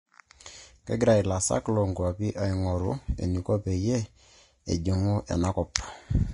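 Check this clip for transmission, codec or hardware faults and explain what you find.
One codec fault runs through the whole recording: Vorbis compression damage, plainly audible from start to end of the speech.

Nothing is present above 10.5 kHz, and the remaining treble has a hissy, grainy texture, with consonant onsets smeared. The likely cause is Vorbis encoding at low quality, which fits a bitrate near 30 kbps. The encoder lowers the cut-off and quantises high-frequency residue so coarsely that fine detail is replaced by noise of similar energy.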